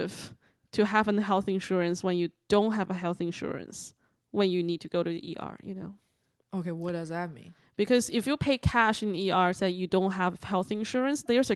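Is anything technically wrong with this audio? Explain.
No, nothing is technically wrong with this audio.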